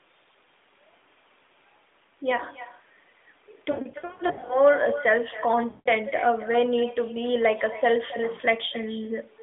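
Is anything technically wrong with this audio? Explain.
Yes. With no echo canceller at the far end, its loudspeaker feeds back into its microphone, so every phrase returns about a third of a second later as a thin copy roughly 15 dB quieter.

Lost AMR speech frames from radio errors occur from 3.72 to 4.57 s, about 460 ms of gaps scattered across that stretch in bursts up to 80 ms. Each loss makes the decoder stretch and fade the last good sound, so the voice warbles, dips and returns rough. A second 160 ms loss at 5.70 to 5.92 s briefly smears and fades the sound again over the narrowband AMR line.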